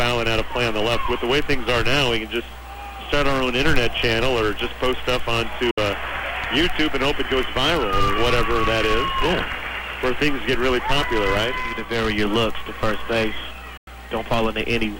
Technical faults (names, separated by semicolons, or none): digital broadcast dropout